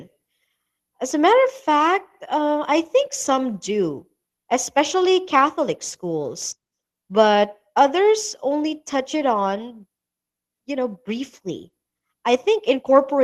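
Nothing goes wrong anywhere in this speech recording, so there's no technical fault to point to at any moment.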